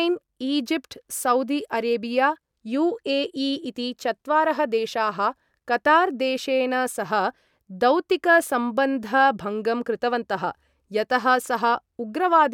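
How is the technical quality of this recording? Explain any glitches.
Nothing stood out as a technical problem on listening, so there are no glitches to explain.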